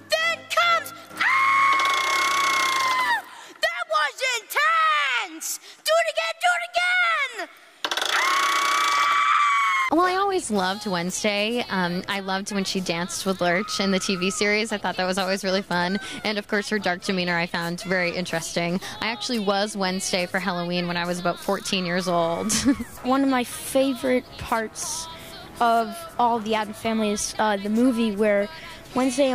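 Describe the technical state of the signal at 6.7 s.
At 6.7 s the signal is intact, with no audible dropout, distortion, glitch or other technical fault.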